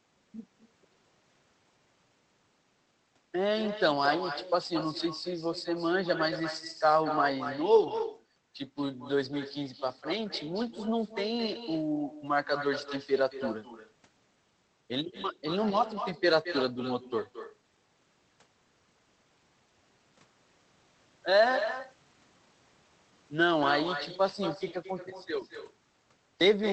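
Echo with no canceller runs throughout the speech. The far end's loudspeaker feeds its microphone, so every phrase returns about a fifth of a second later, about 9 dB quieter and thin.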